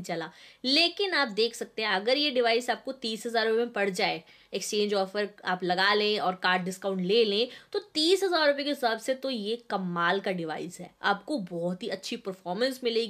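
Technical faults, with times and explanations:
No technical faults are present, so there are no times or explanations to give.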